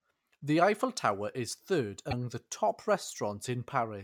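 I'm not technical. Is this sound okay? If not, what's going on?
No. Between "tower is third" and "the top", at 2.10 to 2.13 s, the speech jumps with a tiny glitch, likely a broken MP3 bit reservoir reading the wrong data after a missing piece.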